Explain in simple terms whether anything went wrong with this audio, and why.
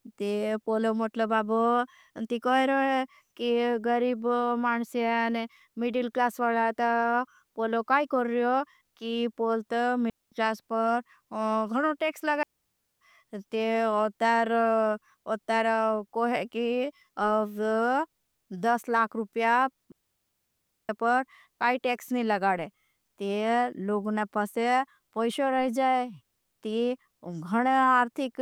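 Three gaps of near silence cut into the speech, each a digital wireless dropout: the radio link lost too much data, so the receiver muted briefly rather than play damaged audio. The sound drops out cleanly, with no crackle or burst on either side. The first runs 10.10 to 10.32 s, between "हो कि पोल ता" and "क्लास पर". The second runs 12.43 to 13.01 s, after "गणों टेक्स". The longest, nearly a second, runs 19.92 to 20.89 s, between "दस लाख रूपया" and "पर काई टेक्स नहीं".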